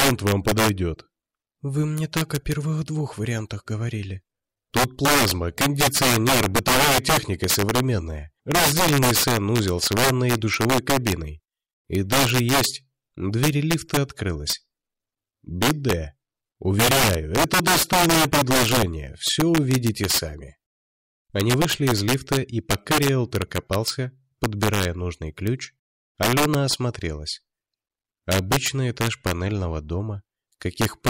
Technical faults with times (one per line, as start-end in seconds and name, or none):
0.00-31.10 integer overflow